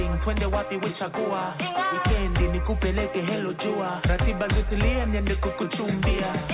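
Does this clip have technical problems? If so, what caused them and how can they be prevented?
No, there are no technical problems in this clip.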